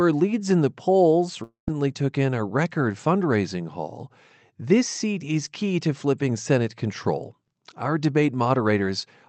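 Just after "leads in the polls", from 1.43 to 1.70 s, the sound breaks off and is replaced by a buzzy continuation of the last sound that fades for roughly a quarter of a second, thinning into near-silence before "took in a record" arrives with a stretch of about 0.24 s missing. The likely cause is a long network dropout in the call path, an Opus stream with its top end cut at 8 kHz, consistent with about 24 kbps. Unlike a brief packet loss, which is smoothed over almost inaudibly, this concealment runs out and decays, and unlike a plain mute or edit, the gap starts with that fading buzz rather than a clean cut.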